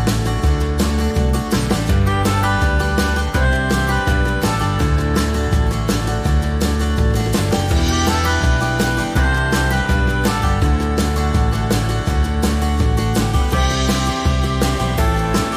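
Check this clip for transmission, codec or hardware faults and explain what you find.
Nothing stood out on listening to this clip.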